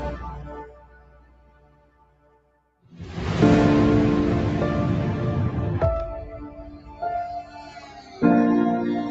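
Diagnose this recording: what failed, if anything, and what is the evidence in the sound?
In call processing, a speech noise suppressor was left on for non-speech sound. Levels swing by about 20 dB, and the waveform envelope visibly pumps as sustained parts sink.

The noise suppressor cut sound at 0.43–2.93 s (about 15 dB deep), 6.47–7.02 s (about 13 dB) and 7.42–8.22 s (about 11 dB). The spectrogram shows sustained energy fading while onsets remain.

Mains hum at 50 Hz enters at 5.59 s and runs to the end, about 20 dB below the signal. It points to a ground loop in the analogue wiring and would show as a steady horizontal spectrogram line.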